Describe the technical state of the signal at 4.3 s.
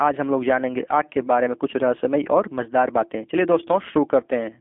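At 4.3 s, as across the whole clip, the speech has passed through a G.729 codec, whose rough, buzzy quality fits an 8 kbit/s link. It rebuilds each 10 ms frame from a filter, pitch predictor and sparse pulses, leaving roughly telephone band (200 Hz to 3.4 kHz), nothing above 3.5 kHz, and a plainly synthetic roughness.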